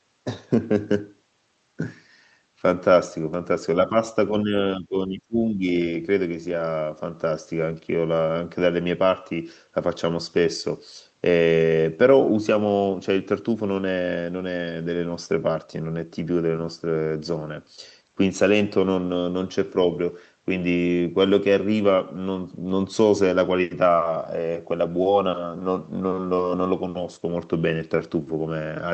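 At 3.87 to 3.93 s the speech dips by about 10 dB, then from 4.32 to 5.66 s it drops by up to about 15 dB in patches totalling around 0.7 s. This is likely speech suppressed in double talk, with the echo canceller ducking the talker while the far side spoke. On a waveform the envelope pinches in, and a spectrogram shows faded, gappy bands against the 8 kHz ceiling of the Opus call path.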